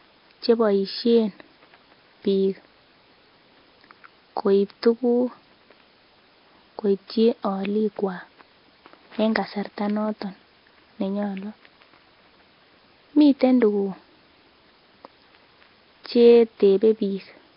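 Throughout, heavy Nellymoser compression is at work. The Flash-era Asao codec likely coded short blocks at a fixed, coarse bit budget, fitting a rate near 22 kbps. Starved bands become noise, leaving the speech rough, hissy and smeared underwater, with nothing above 5.3 kHz.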